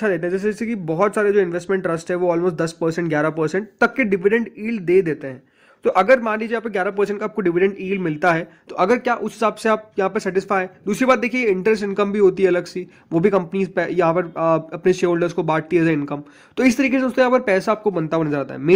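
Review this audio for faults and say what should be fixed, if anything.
Nothing needs fixing: the signal holds steady throughout, with continuity and no audible disturbance anywhere in the recording.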